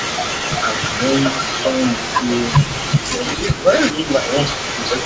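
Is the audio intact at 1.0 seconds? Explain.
No. At 1.0 seconds the speech carries an echo leak, which runs from the start of the clip to 2.96 s. The likely cause is a far end playing the call on a loudspeaker, where the echo canceller failed to strip out what its microphone picked up and sent it back. The result is a delayed copy of the speech trailing about 0.39 s behind the original, only a little quieter than the direct sound.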